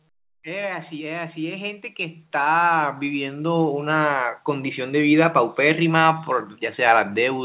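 From 0.43 s to 4.83 s the level climbs steadily by about 19 dB. This is automatic gain rising: the gain control judged the incoming speech too quiet and kept raising its gain over those 4.4 seconds. The speech and the background noise swell together, so the noise floor becomes louder along with the talker. Throughout, nothing is heard above 4 kHz, which fits a narrowband call codec such as G.711 A-law.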